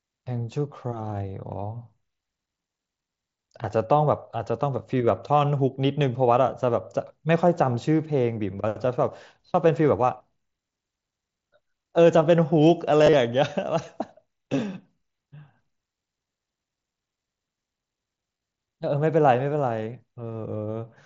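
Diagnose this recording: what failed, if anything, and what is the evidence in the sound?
The fault is concealed Bluetooth headset packet loss, on the wireless link between headset and phone. Single dropouts at 7.41 s and 14.84 s are almost inaudible. Each spans about 7.5 ms, which fits one lost mSBC frame. At 13.04 to 13.13 s and 18.35 to 18.41 s, gaps cluster. The longest runs are 30 ms and 15 ms. These give a brief buzzy, held tone and a small warble as real audio resumes. The receiver filled each gap by repeating the best-matching recent stretch of waveform.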